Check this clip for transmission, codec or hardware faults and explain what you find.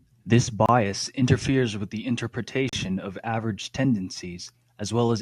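The speech has two short dropouts, both a gap between stream segments. The first runs from 0.66 to 0.69 s, lasting about 27 ms, just before "interferes with the". The second runs from 2.69 to 2.73 s, lasting about 37 ms, just before "of average". They fall about 2 s apart, matching 2-second segments. The time stamps of adjacent segments don't meet, so the player fills the gap with silence. Each one sounds like a hard-edged hole. No audio is lost.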